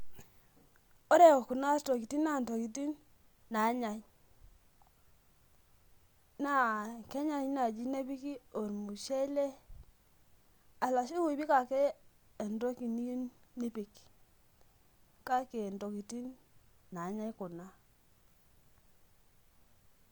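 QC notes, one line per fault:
Nothing to flag here; the speech comes across without any trouble worth noting.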